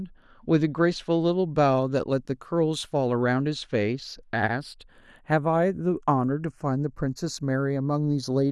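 Speech whose left and right channels are drifting apart throughout, as if recorded on two devices with clocks disagreeing by around 30 ppm, so the inter-channel delay creeps to a fraction of a millisecond. Summed to mono it flanges slowly; a spectrogram shows comb notches gliding across frequency.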